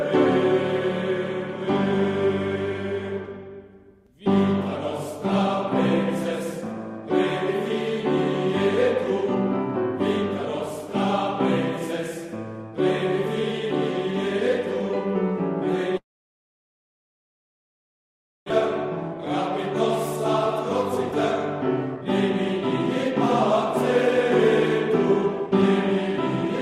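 From 15.97 to 18.52 s the sound breaks off. A brief fading tail gives way to about 2.4 s of silence, and when the audio resumes roughly 1.6 s is simply gone. This is most likely a long network dropout, not a short packet-loss gap, because of that length and the skipped material.

Two jitter buffer speed-ups follow as the receiver sheds built-up delay: 21.95 to 22.31 s runs 18% fast, and 24.07 to 26.45 s runs 5% fast. Pitch stays unchanged, so this is not a resampling error.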